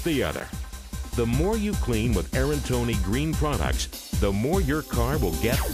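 A block of digital silence at 0.40 s: for about 7.5 ms the samples drop to zero, as if the output buffer was not filled in time. The sound cuts out and resumes abruptly with no fade, so the hole is heard as a short tick or click.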